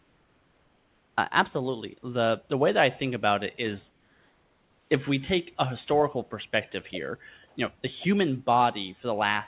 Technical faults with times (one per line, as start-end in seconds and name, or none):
0.00-1.16 comfort noise in place of the background
3.90-4.90 comfort noise in place of the background
7.48-7.56 comfort noise in place of the background